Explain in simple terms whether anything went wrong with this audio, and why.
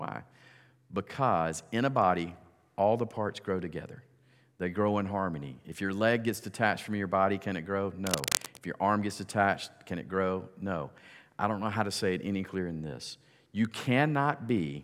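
A worn cable or connector was likely moved, making its contact flicker and causing cable scratch noise, a fairly loud scratchy rustling over the speech from 8.07 to 8.58 seconds.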